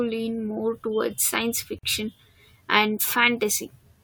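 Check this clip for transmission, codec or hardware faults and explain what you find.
There is one fault in this speech clip, a gap at a join of encoded pieces. From 1.79 to 1.83 s, two separately encoded segments were joined without trimming the encoder's start-up delay and last-frame padding. The result is a 48 ms silence with smeared edges, after which the speech resumes exactly where it stopped.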